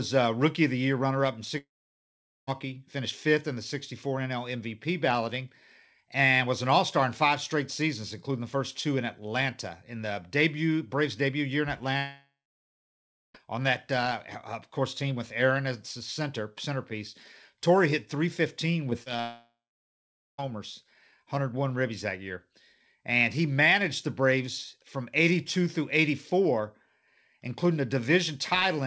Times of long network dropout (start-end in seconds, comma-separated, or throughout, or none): 1.58-2.49, 11.97-13.36, 19.21-20.40